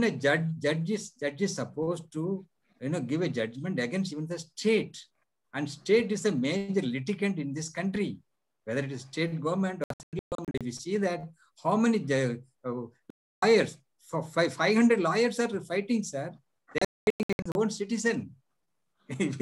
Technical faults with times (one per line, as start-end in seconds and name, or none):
9.84-10.61 digital broadcast dropout
13.10-13.43 digital broadcast dropout
16.78-17.55 digital broadcast dropout